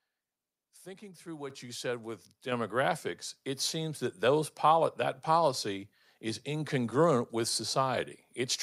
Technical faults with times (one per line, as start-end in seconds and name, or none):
1.50 microphone volume stepped up
2.52 microphone volume stepped up